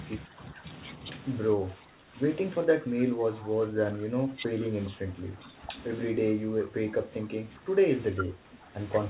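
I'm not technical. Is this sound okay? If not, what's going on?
No. The speech keeps dipping in level, at 0.27 to 0.64 s, 1.55 to 2.17 s, 2.65 to 4.75 s, 4.91 to 5.73 s, 6.13 to 7.85 s and 8.16 to 8.76 s. This is likely speech suppressed in double talk. Both sides spoke at once, and the echo control turned this side down too.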